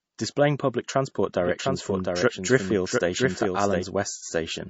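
The speech has likely been through a low-bitrate MP3 encode and then saved again at a high bitrate. The re-encode cannot restore the lost detail, so nothing is heard above 7.6 kHz, with a dull, smeared top end from start to finish. From 1.41 s to 3.83 s, just after "public transport", a doubled audio track appears, likely a second, out-of-step copy mixed in. A dry, full-band repeat trails about 0.7 s behind at a few dB quieter, starting and stopping abruptly.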